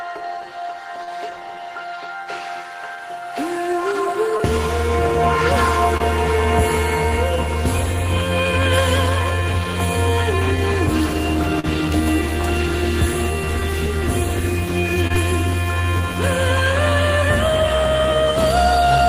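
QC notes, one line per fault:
1.03–1.09 s, 4.37–4.41 s, 5.97–6.01 s, 11.60–11.65 s and 15.07–15.12 s: short concealed packet loss. Each time a chunk of audio didn't arrive, about 40 ms at 1.03 and 11.60 s and about 20 ms at the other three. The decoder papered over the gap by carrying the preceding sound forward, either extending its pitch or filling with shaped noise, then crossfading back into the real signal. You hear that as a quick smear or wobble, and a brief transient can go missing.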